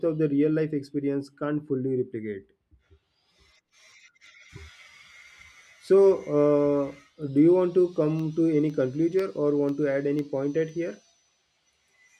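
Periodic USB or driver dropouts, from 8.19 s to 11.69 s, drop a tiny fraction of a millisecond into silence every 0.5 s, heard as regular ticks through the speech.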